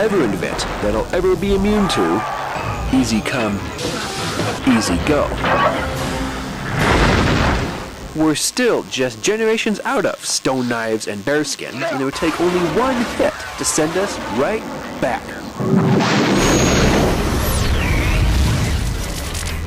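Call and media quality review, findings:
DECT cordless phone buzz throughout: thin 100 Hz buzz, roughly 25 dB under signal. Nearby DECT 10 ms bursts rectified in the audio path. Spectrogram: stacked 100 Hz harmonic lines.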